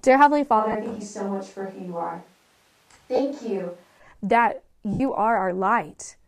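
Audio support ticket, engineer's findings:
Sound goes roomy and hollow from 0.61 to 3.98 s, thinner low end, level roughly unchanged, room noise up to about 35 dB below speech. Switch to a distant microphone likely: close mic dropped, farther pickup carrying more reflections and ambience. Abrupt in and out.

Brief noisy smears at 0.72 s (30 ms), 3.16 s (30 ms) and 4.93 s (70 ms), the last fading toward silence. Lost LE Audio frames: LC3 decoder repeating the last spectrum with randomised signs, attenuating over longer gaps. Durations fit three and seven 10 ms frames.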